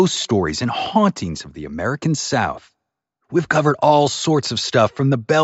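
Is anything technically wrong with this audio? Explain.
No, nothing in this speech recording points to a technical fault.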